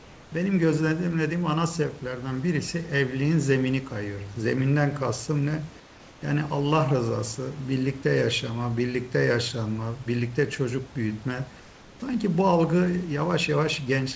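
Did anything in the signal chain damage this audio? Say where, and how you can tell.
Yes, at the call-processing stage: comfort noise in place of the background, three times, at 0.00–0.32 s, 5.80–6.22 s and 11.60–12.02 s. In each pause, the room noise, sitting about 25 dB under the speech, gives way to a flat, textureless hiss that is about 2 dB quieter in the first two gaps and about 4 dB quieter in the third. The likely cause is discontinuous transmission: the sender stops sending during silence and the receiver synthesises shaped noise, which points to standard comfort-noise generation.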